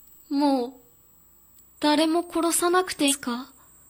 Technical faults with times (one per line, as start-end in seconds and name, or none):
0.00-3.90 USB whine
3.07-3.13 damaged data in a compressed stream